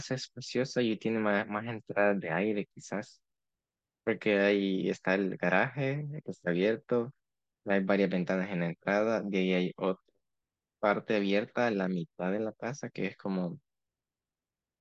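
Nothing here needs a timestamp, since the speech runs along without any technical fault worth pointing out.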